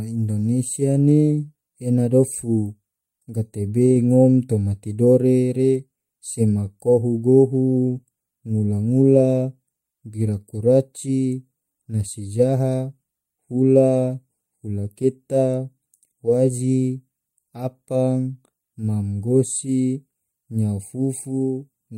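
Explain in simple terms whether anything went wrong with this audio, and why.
Nothing went wrong with this speech recording that a listener can pick out. There is no moment anywhere in it that stands out as a problem.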